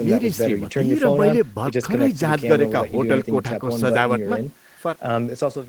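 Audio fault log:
No faults found.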